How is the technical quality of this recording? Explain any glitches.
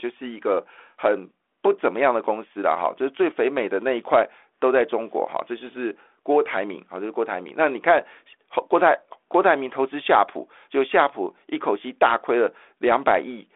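No glitches or faults turn up in this speech recording. It arrives over a telephone path coded with G.726 ADPCM at 32 kbit/s, so the sound is confined to roughly 300 Hz to 3.5 kHz and carries only a light coding texture.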